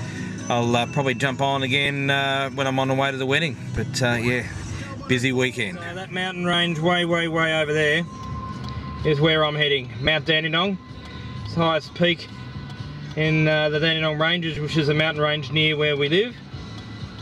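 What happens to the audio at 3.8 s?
A lost LE Audio frame occurs at about 3.77 s. A brief gap in the Bluetooth LE Audio stream, about 7.5 ms long and consistent with a single missing LC3 frame, forced the decoder to conceal the hole by reusing the previous frame's spectrum with randomised signs. That replaces the missing slice with a very short, noisy smear that has roughly the right tonal colour but none of the original detail. The dropout is too brief for the concealment to fade toward silence.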